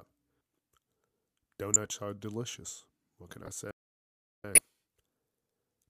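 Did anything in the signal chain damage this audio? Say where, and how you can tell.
Yes. The codec stage decoded corrupt frames. Short glitches appear at 1.74–1.76 s, 3.45–3.49 s and 4.55–4.61 s. Damaged bits put energy at the wrong frequencies.

A playback stall occurs at the playback stage. The sound stops from 3.71 to 4.44 s, about 730 ms, then resumes. The player likely ran out of data.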